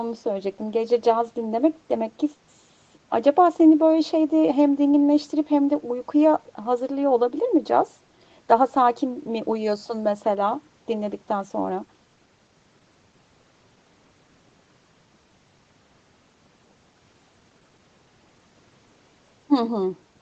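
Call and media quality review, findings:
No faults found: speech passes through normal call microphone processing and the WebRTC call path, with nothing above 8 kHz as expected for this Opus setting.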